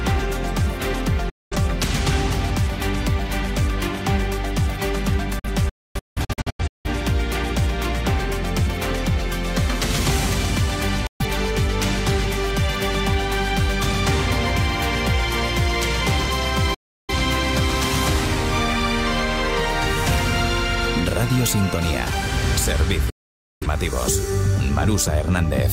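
The sound mutes abruptly, with an 8 ms fade, at 1.29–1.56, 11.06–11.25, 16.74–17.14 and 23.10–23.66 s, and in scattered short holes across 5.39–6.89 s. This is digital broadcast dropout: the receiver lost or rejected frames and silenced output, so that material is gone.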